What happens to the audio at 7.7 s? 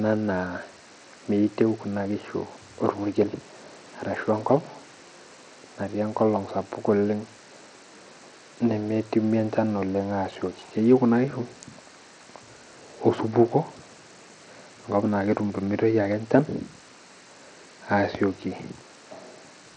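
At 7.7 s the speech sounds dull and gritty, with flickering treble, as throughout the clip; likely Bluetooth SBC compression starving the top sub-bands, consistent with roughly 80 kbps.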